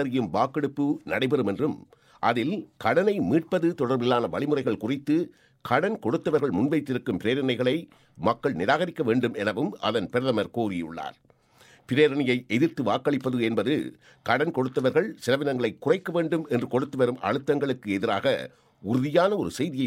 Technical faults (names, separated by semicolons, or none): none